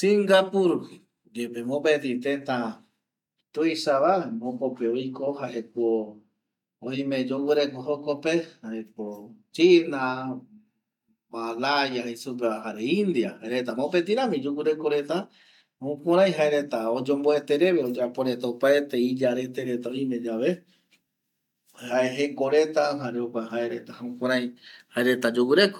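No technical faults can be heard at any point in the recording.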